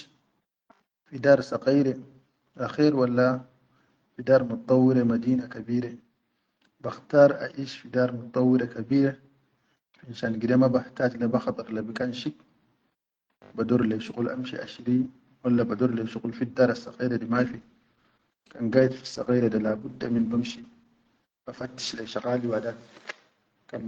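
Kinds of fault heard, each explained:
Call bitrate drop: from 17.34 to 22.21 s the speech turns coarse, watery and muffled, consistent with the encoder falling from about 40 to 13 kbps.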